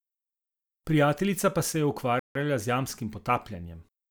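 A likely playback stall, the player starved of data or blocked, cuts this speech recording to silence from 2.19 to 2.35 s, a 158 ms gap before the sound resumes.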